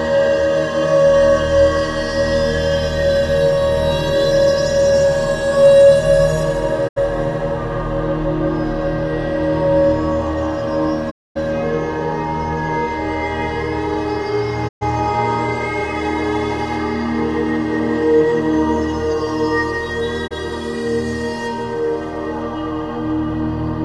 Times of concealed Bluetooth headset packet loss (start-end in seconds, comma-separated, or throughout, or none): none